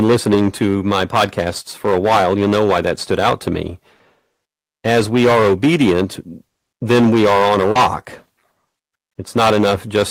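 Hard clipping runs through the whole of this speech recording. The signal is driven about 16 dB beyond what some stage in the chain can pass, so every loud peak is sliced flat. Around 7 percent of the waveform sits against that ceiling, and the squared-off tops throw harmonics high into the spectrum, giving a harsh fuzz on each stressed syllable. Short concealed packet loss appears at 3.95 to 4.02 s and again at 7.71 to 7.78 s. In each case roughly 40 ms of audio failed to reach the decoder in time. The receiver covered the gap by extending the preceding sound, carrying its pitch forward or substituting shaped noise, before blending back into the real signal. It is heard as a brief smear or wobble in the flow of speech.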